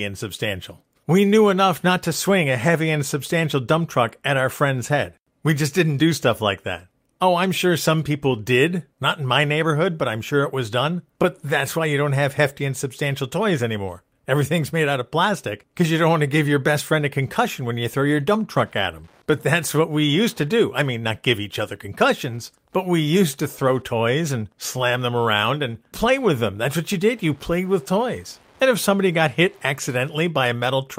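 From 18.59 s, after "you throw your dump", Wi-Fi interference adds faint rectified-beacon ticks every 102.4 ms, seen as evenly spaced thin vertical spectrogram lines.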